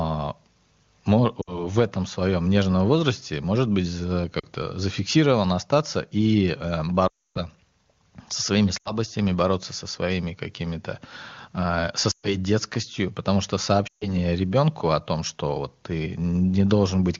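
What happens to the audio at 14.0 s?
Lost AMR speech frames cause a short dropout from 13.87 to 14.13 s. Corrupted frames failed their checks, so the decoder repeated its last good settings at falling gain. About 140 ms of speech drops to near silence within two frames, then returns briefly rough.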